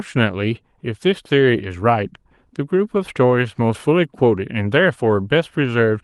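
No technical faults are audible.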